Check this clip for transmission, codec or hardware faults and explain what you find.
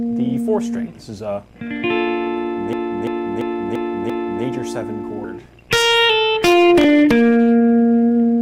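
One hardware fault is present: a system hang loop from 2.73 to 4.44 s. The playback system stalled while the audio device kept replaying its ring buffer, repeating one 341 ms segment five times at 2.93 Hz, consistent with a 16384-sample buffer. The result is a machine-gun stutter.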